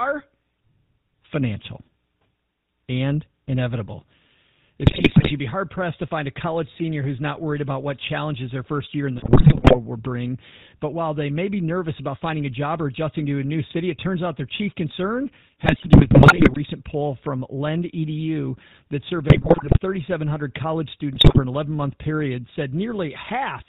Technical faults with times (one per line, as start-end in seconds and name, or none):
0.00-23.68 GSM full-rate codec
4.82-5.32 GSM bit errors
9.18-9.75 GSM bit errors
15.64-16.57 GSM bit errors
19.28-19.79 GSM bit errors
21.14-21.39 GSM bit errors